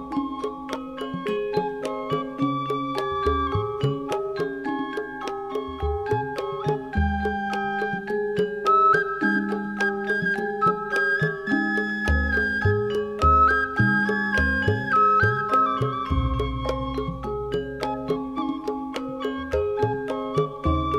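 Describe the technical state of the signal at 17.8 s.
At 17.8 s the signal is intact, with no audible technical fault at that point.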